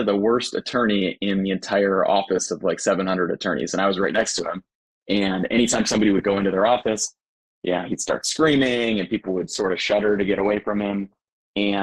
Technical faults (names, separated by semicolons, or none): adaptive stream at a lower bitrate